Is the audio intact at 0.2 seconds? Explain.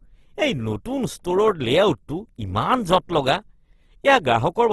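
No. At 0.2 seconds, as across the whole clip, the speech carries Opus compression damage, likely from a low-rate encode. The sound is rough and grainy, with noisy texture where the encoder ran short of bits and filled bands with folded or noise-like content instead of leaving gaps. Nothing is present above 12.2 kHz. The artefacts fit the music-oriented CELT mode at a bitrate around 16 kbps.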